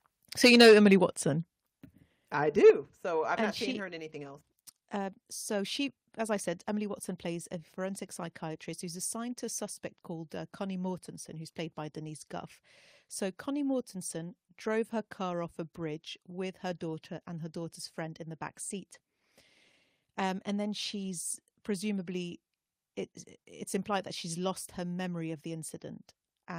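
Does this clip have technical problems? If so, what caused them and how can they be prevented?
Yes. Microphone overload likely comes from an input gain set too high, so peaks drive the converter past full scale and their tops are sheared off. From 0.44 to 0.94 s the level runs about 8 dB over, with around a tenth of samples flattened. At 2.65 to 2.70 s it is about 3 dB over, but nearly a third are cut. Both passages take on a harsh, crackling edge. Setting the input gain lower, so loud peaks stay several decibels below full scale, prevents this.

The microphone volume was stepped down three times, likely by the call software's automatic gain control reacting to the clipping and cutting the device's input level in one jump each time. The level drops abruptly by about 2 dB at 0.45 s, about 6 dB at 1.44 s and about 5 dB at 2.70 s, taking the voice and the background down together. The last drop follows right after a distorted peak. 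Disabling automatic microphone adjustment in the call software, after setting a sensible fixed gain, prevents these steps.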